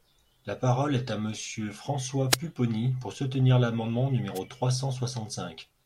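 Speech with two wireless microphone noise hits, at 2.29–2.37 s and 4.34–4.40 s: brief static swishes as the FM radio link fades, unlike digital dropouts, which leave silence or repeats.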